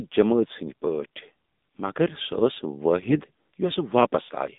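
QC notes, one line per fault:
throughout: AMR narrowband mobile codec, band held to 200 Hz–3.7 kHz with a hard spectrogram ceiling; buzzy, synthetic timbre fits a low rate near 7.4 kbps.
3.00–3.21 s: AMR bit errors, a few percent of bits flipped across about ten 20 ms frames; pitch and level hold while sound turns scratchy, gargly, with smeared harmonics on the spectrogram.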